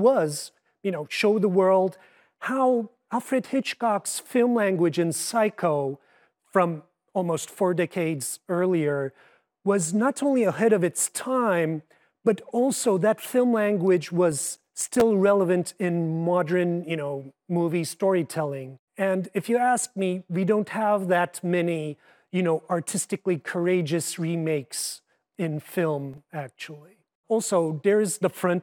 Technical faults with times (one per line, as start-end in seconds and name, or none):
14.32-15.01 processor overload crackle
26.14-26.27 processor overload crackle